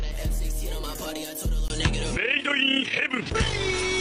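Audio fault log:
1.68–4.0 s, input switched to a poorer device: A brief gap of about 20 ms opens at 1.68 s. After it, everything above 10.5 kHz is gone, so the sound turns duller and less airy for the rest of the clip, and a new background noise sits far below the signal, roughly 45 dB down. The loudness stays about the same. The abrupt band cut, the change in noise and the dropout at the switch point to a likely mid-recording handover to a narrower-band microphone or headset input.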